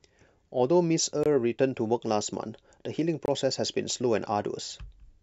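At 1.23 to 1.26 s and again at 3.26 to 3.28 s the speech stops dead for about 23 ms each time, a gap between chunks. The audio arrives in 2-second pieces, and each join leaves a short stretch of added silence before the next piece plays. Unlike a dropout, nothing is missing: the speech resumes exactly where it paused, so the holes sound like hard-edged hesitations spaced at a regular 2-second interval.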